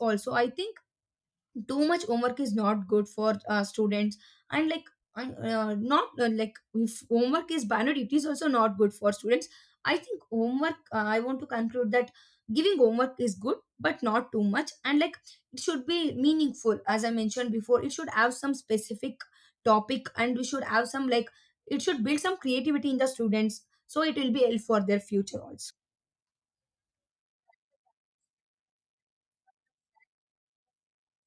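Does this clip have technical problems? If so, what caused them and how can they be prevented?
No, there are no technical faults.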